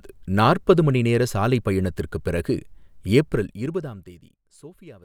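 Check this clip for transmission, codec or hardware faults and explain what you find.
One fault shows up, zipper noise, from 3.14 to 4.44 s, starting right after "நேர சாலை பயணத்திற்குப் பிறகு". A gain reduction of about 25 dB is applied in discrete jumps with no smoothing between them, roughly fifty times a second. Each jump cuts the waveform abruptly and leaves a tiny click. As the speech fades, those clicks run together into a fine ticking, zipping texture that rides on the voice until the level settles.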